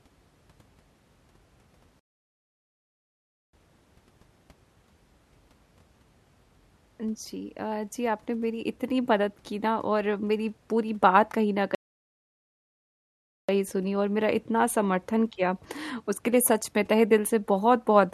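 At 1.99 s and again at 11.75 s the speech cuts out mid-flow in a playback stall, silent for 1.54 s and 1.74 s, likely because the player ran dry or was blocked. The waveform shows flat gaps; the spectrogram shows blank vertical bands.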